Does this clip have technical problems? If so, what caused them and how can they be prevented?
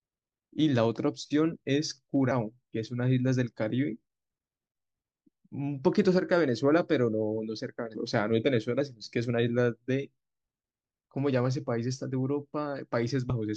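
Yes. At 2.30, 7.94 and 13.29 s the speech jumps ahead, losing about 0.2, 0.1 and 0.04 s. This is compressed frames skipped: whole frames of roughly 21.3 ms are missing or rejected as damaged. Check file integrity and use error-protected transmission.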